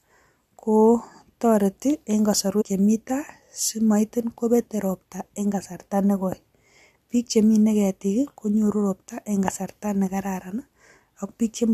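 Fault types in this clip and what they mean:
Compressed frames skipped: at 2.60 to 2.62 s, a run of whole compressed frames never reaches the output, either missing from the stream or rejected by the decoder as corrupt. The speech lurches forward by roughly a tenth of a second, consistent with about five frames of around 23 ms each.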